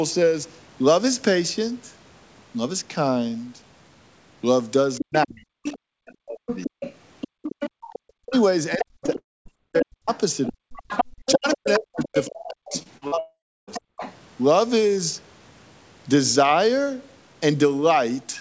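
From 4.95 s to 14.15 s a second voice, the other side's voice leaking through, sits roughly 10 dB under the main talker. The likely cause is loudspeaker echo the canceller failed to remove. Unlike crosstalk on a line, it comes and goes and follows the far talker.

While that echo is present, the main voice suffers speech suppressed in double talk. From 5.0 s to 6.68 s, about 0.7 s of it is pulled down by up to around 40 dB, and it dips or breaks off in pieces. This is likely the canceller ducking its own talker along with the echo. It differs from a dropout because the level sinks in time with the far side rather than the audio stopping.

From 7.28 s to 7.82 s the background is gated by the echo canceller. The room tone falls by about 34 dB for roughly 0.3 s, then returns. Only the ambience drops, not the voice, which is what separates this from double-talk suppression.

The double-talk suppression returns from 8.11 s to 13.92 s, cutting about 3 s of the talker in total.

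At 9.06–9.10 s a short concealed packet loss patches a 20 ms hole, heard as a brief smear.

A long network dropout follows at 9.18–9.47 s. About 280 ms is missing, and after a fading buzz or hiss roughly 230 ms is pure silence. Unlike the short loss, the concealment gives out and a true hole is left.

From 12.79 s to 13.14 s, repeated packet loss produces four gaps, the longest 42 ms, with about a third of the span synthesised. The sound turns choppy.

A second dropout runs from 13.20 s to 13.69 s. About 480 ms is lost, roughly 330 ms of it silent. Everything is band-limited to 8 kHz, which fits a 64 kbps G.722 call path.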